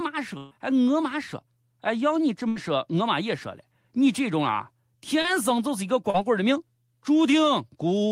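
At 0.37 to 0.55 s and 2.48 to 2.58 s, bursts of packet loss drop about 140 and 80 ms. The last sound is stretched and faded, then speech jumps ahead with audio missing. At 5.22 to 5.26 s and 6.10 to 6.16 s, short concealed packet loss covers only 20 to 40 ms. It leaves a brief smear that blends back rather than an audible skip.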